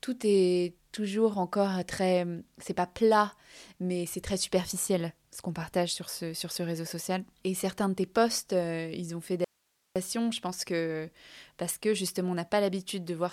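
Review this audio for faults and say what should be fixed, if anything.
At 9.44 s the speech drops out abruptly, right after "euh ils ont fait", and returns at 9.96 s with "je pense que parce". For that 0.51 s gap only hiss remains, roughly 45 dB below the speech level. This is an audio dropout to a faint residue: the signal path stayed live while the wanted signal vanished, most likely from a momentary loss at the source or connection rather than a silenced channel. The change is instantaneous, not a natural pause. To prevent it, secure and monitor the input connection and record a backup feed.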